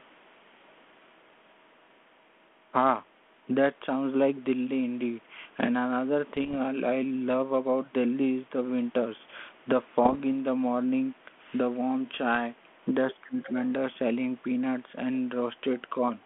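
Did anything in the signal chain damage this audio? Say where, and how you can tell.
Yes. Bit errors on the ADPCM link at 6.33–6.54 s, 10.04–10.16 s and 12.35 s upset the decoder's step size, leaving rough pops that show as broadband spectrogram smears.

From 13.23 to 13.56 s the speech drops by around 15 dB, likely speech suppressed in double talk by the call processing. The waveform envelope shows a clear notch there.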